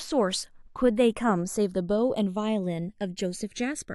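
Speech, with the two channels drifting apart for the whole clip: they appear to come from devices on separate clocks differing by something like 150 ppm, so the inter-channel delay creeps up to about half a millisecond. Summed to mono, comb notches sweep slowly, heard as slow flanging.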